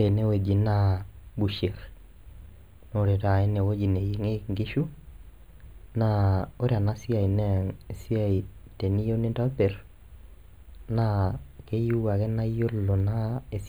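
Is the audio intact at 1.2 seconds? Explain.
No. At 1.2 seconds the speech carries channel delay (comb filtering), which runs through the whole clip. One channel arrives a fraction of a millisecond late, roughly a tenth of a millisecond, which fits a delay of a few samples. When the two channels are summed to mono, parts common to both cancel at evenly spaced frequencies. The first notch sits around 5 kHz. The voice sounds hollow, phasey with fixed notches.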